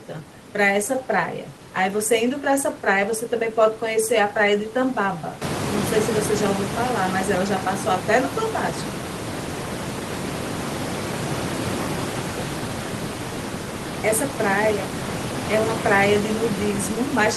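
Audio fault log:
No faults heard.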